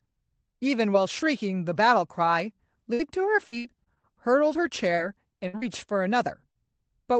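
At 2.93 to 3.01 s comes a burst of packet loss. About 60 ms of the call never arrived in time, and the receiver bridged the hole by stretching the last sound for roughly 58 ms while fading it out. Playback then resumes further along, so that slice of speech is skipped. It sounds like a brief held buzz or hiss with a jump afterwards. A spectrogram shows smooth, repeated harmonics or flat noise shrinking in level, then an abrupt change where real audio returns.

From 3.47 to 4.05 s there is repeated packet loss, giving a robotic sound. Five separate holes, the longest about 59 ms, each get patched with continued sound, and together the patches fill about a third of the stretch. Because the gaps follow each other closely, the speech turns choppy, with pieces missing. On the waveform the envelope looks chopped. The spectrogram shows alternating blocks of frozen, smeared harmonics and normal speech.

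At 4.95 to 5.00 s and again at 5.57 to 5.64 s there is short concealed packet loss. These are losses of about 20 ms and 40 ms, each filled from the preceding sound and blended back into the real audio. They come across as a quick smear or wobble, and a consonant can drop out. On a spectrogram each is a narrow patch where detail blurs.

Between those two short losses, at 5.48 to 5.55 s, a second burst of packet loss loses about 60 ms. Roughly 56 ms of it is covered by a fading continuation before the audio jumps ahead, so it sounds like another short buzz-and-skip. In the waveform it appears as a decaying, overly regular segment followed by a discontinuity. Across the whole spectrogram, the call codec's band limit shows as an empty region above about 8 kHz.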